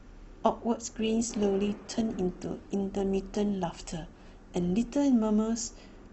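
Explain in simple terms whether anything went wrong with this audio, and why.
Something did go wrong here: the speech dips in quality from 0.97 to 4.97 seconds, a case of an adaptive stream at a lower bitrate. The connection slowed, so the player switched to a cheaper, more squeezed version of the same recording. The voice picks up a watery, processed sound, then snaps back. Unlike a dropout, nothing goes silent or skips; the sound keeps flowing, only its quality changes abruptly at both ends.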